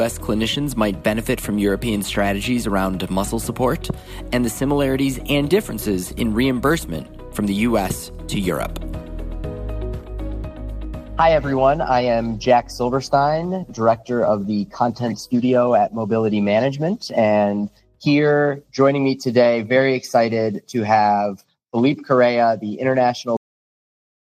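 The audio stops abruptly at 23.37 s in a cut-off end: the final buffers were never written or played, so the sound is severed mid-event rather than finishing, and the last second or so, through 24.37 s, is pure digital silence. On a waveform the signal ends as a vertical wall and then runs flat with no decay tail. On a spectrogram every frequency band goes dark at once along a single sharp vertical edge.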